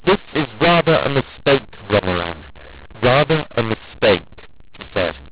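Throughout the speech, mu-law and A-law are mixed up: A-law bytes decoded as mu-law scramble the levels. It sounds harsh and gritty, with hiss in the pauses. The waveform shows noise-filled gaps and distorted peaks, and the spectrogram stops at 4 kHz.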